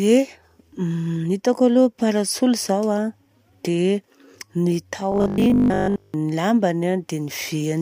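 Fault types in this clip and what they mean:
Robotic sound from repeated short buffers: from 5.12 to 6.14 s the speech collapses into a hard, metallic buzz pitched at 50 Hz, with the rhythm of the talking still roughly traceable beneath it. The likely cause is audio arriving too slowly, so playback keeps looping the last block of sound, which fits a 20 ms buffer, for roughly seven tenths of that stretch while the real audio in between is skipped.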